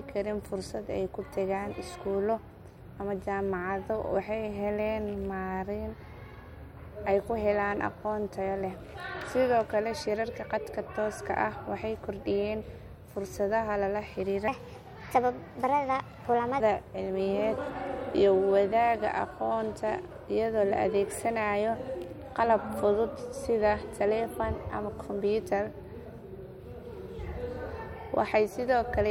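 From 14.48 to 16.60 s the speech turns higher and hurried, pitched up by about four semitones, before snapping back. This section at the wrong speed runs 1.26 times too fast, likely because it was played back against the wrong clock.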